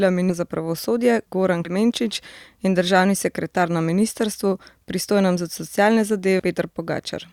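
Three spots where compressed frames are skipped in this speech: 0.29 to 0.32 s, 1.65 to 1.70 s, and 6.39 to 6.42 s. Each time, whole frames never got played, missing or rejected by the decoder, so the speech lurches forward, losing roughly 300 ms, then under 100 ms, then about 400 ms. The jumps fit a 20 ms frame size.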